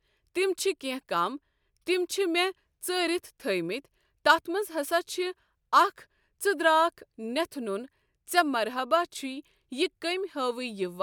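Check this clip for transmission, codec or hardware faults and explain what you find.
Nothing stands out here as a fault, so there's nothing to flag in this bit of speech.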